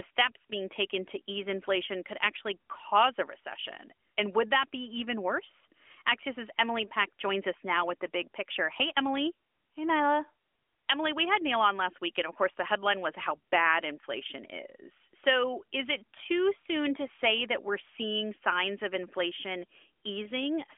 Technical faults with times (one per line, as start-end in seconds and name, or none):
none